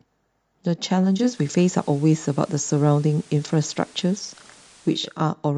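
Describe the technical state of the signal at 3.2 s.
At 3.2 s the receiver is running on the analogue FM feed. It's the middle of a digital radio blending to analogue stretch that runs from about 0.96 s to 5.27 s. The set lost its digital lock and took roughly half a second (485 ms) to cross-fade over to the FM broadcast of the same station. So you hear a hiss floor around 30 dB below the speech, and the level sits about 2 dB off from the digital sound.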